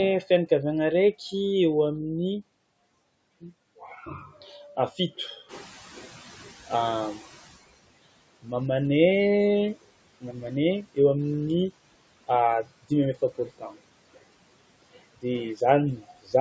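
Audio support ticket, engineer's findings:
Noise suppressor artifacts, whole clip: steady background held down by about 21 dB, but the reduction runs frame by frame per band, so the noise floor dips in the gaps between speech and comes back up underneath it. Pumping floor, suppressor stage.

Speech cut by the noise suppressor at 3.8–5.6 s, 8.34–8.53 s, 10.2–10.5 s, 12.6–14.2 s, 14.5–15.6 s and 15.97–16.34 s. Quiet speech portions are misread as noise and attenuated with the background, from about 9 dB up to about 21 dB at worst. Each affected stretch sums to roughly a tenth to half a second. Soft consonants and endings sound swallowed.

Noise suppressor catching up, 5.48–7.61 s: room noise jumps about 12 dB near 5.5 s, and the suppressor's noise estimate lags. The new noise leaks through under-reduced, then is cut by about 18 dB once the estimate adapts, roughly 2.1 s later. Adaptation lag in the estimator.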